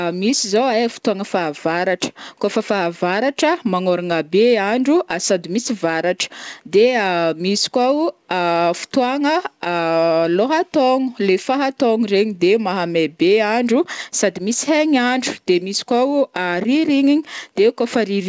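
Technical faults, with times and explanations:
The speech came over a WebRTC call path with no faults, its content stopping at about 8 kHz, which fits a G.722 wideband call codec.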